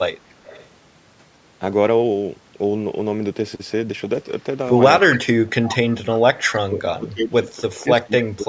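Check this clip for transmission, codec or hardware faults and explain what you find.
Two faults turn up here, both of the kind you get on a speakerphone call, and both trace back to the far end's echo canceller.

Echo leak shows up four times: 0.45 to 0.67 s, 5.11 to 5.18 s, 5.63 to 5.76 s and 6.52 to 6.58 s. Each time you hear a delayed copy of the talker trailing 286 ms behind. It's quietest in the first burst at about 25 dB down, loudest at 5.11 s at about 10 dB down, and about 15 dB down in the last two. The likely cause is a loudspeaker on the other side whose canceller didn't fully strip what its mic picked up, so scraps of the talker's own voice got sent back.

Speech suppressed in double talk hits at 5.21 to 5.30 s, a dip of roughly 30 dB, and again from 6.55 s to the end of the clip, where the voice keeps sinking by up to about 25 dB across roughly a second and a half in total. 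That points to the canceller hearing both sides at once and likely clamping down on everything, so the talker gets pushed down or cut up along with the echo. The band stopping around 8 kHz is just the normal call mic processing.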